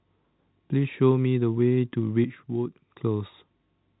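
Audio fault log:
2.24 to 3.01 s, sudden gain jump: the sound and its background drop together by about 7 dB, then return. Likely an unramped digital gain change.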